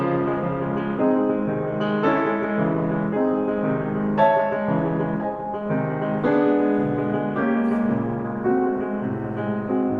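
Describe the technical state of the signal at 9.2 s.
At 9.2 s the music plays through cleanly, with no audible fault in the signal at that moment.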